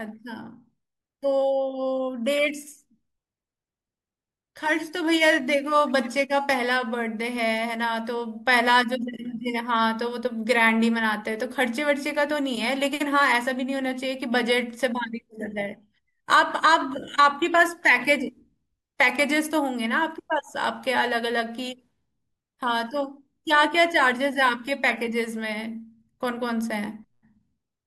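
From 4.58 to 6.54 s, a crude rate conversion repeats or skips samples with no anti-aliasing filter, consistent with a 44.1 kHz to 48 kHz change. The resulting error, roughly 25 dB below the speech, adds a gritty, inharmonic fizz that tracks louder and brighter syllables.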